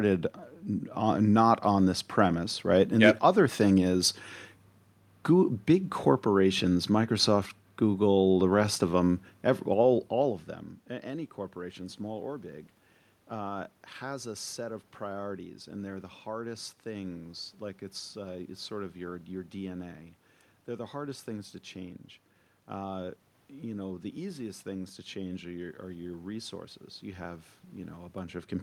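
Nothing here points to a system fault: the background noise belongs to the room, and the level shifts around ten seconds in and again right at the end are simply the talker moving relative to the microphone.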